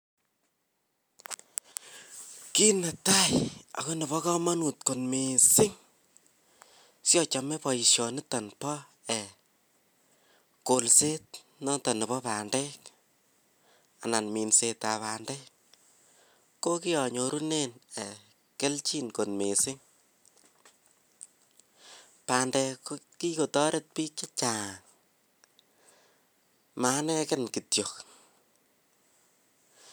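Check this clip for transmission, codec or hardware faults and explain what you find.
Nothing here points to a problem with how the speech was carried, encoded or recorded, so there's nothing to flag.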